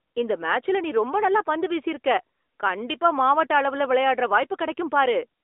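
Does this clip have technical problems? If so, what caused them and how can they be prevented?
Yes. Throughout the clip, the AMR narrowband mobile codec confines the speech to about 300 Hz–3.7 kHz, with nothing above 3.8 kHz. Its pulse-driven vocal-tract model adds a plainly audible buzzy, synthetic edge, which fits a mid-rate mode near 10.2 kbps. A spectrogram shows a flat, hard ceiling near 3.8 kHz. To prevent it, capture the speech directly or over a wideband link instead of a narrowband mobile call.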